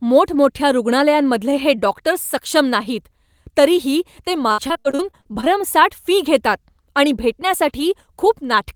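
Just after "तरीही ते", from 4.52 to 5.61 s, repeated packet loss (robotic sound) sets in: roughly a third of that stretch is lost in short holes up to 59 ms long, each patched by extending the previous sound, leaving choppy speech with pieces missing.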